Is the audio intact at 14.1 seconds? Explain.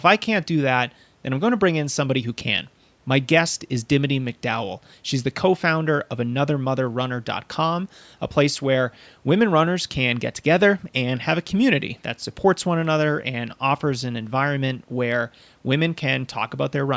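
Yes, at 14.1 seconds the speech comes through intact, with only the usual call microphone processing shaping it and nothing above 8 kHz.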